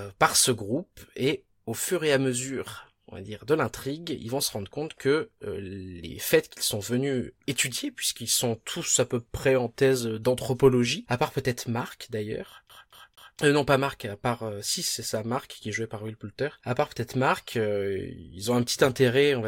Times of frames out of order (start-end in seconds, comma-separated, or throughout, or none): none